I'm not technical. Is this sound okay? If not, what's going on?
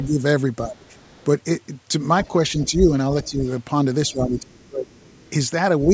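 No. The main voice is repeatedly turned down by speech suppressed in double talk, at 0.0–1.12 s, 2.65–3.41 s, 4.08–4.89 s and 5.86–5.92 s. The speech dips, most heavily around 4.1–4.9 s, likely because the call's echo canceller mistook overlapping talk for echo.

There is also the other side's voice leaking through: a faint second voice at 0.86–1.25 s, 2.24–2.7 s, 3.23–3.51 s and 4.07–5.3 s, clearest around 2.2–2.7 s. This is likely loudspeaker sound reaching the microphone that the echo canceller did not fully remove.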